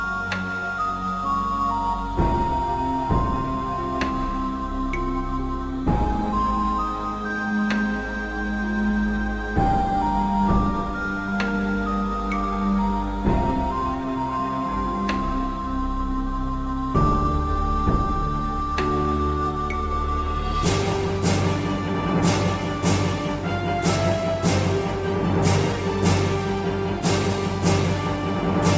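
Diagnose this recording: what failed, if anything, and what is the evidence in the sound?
Aliasing introduced at the sample-rate conversion stage, present throughout. High-frequency content folds back around 8 kHz, about 25 dB below the signal, adding gritty, inharmonic tones. That fits a downsample from 44.1 kHz to 16 kHz with no anti-alias filter beforehand.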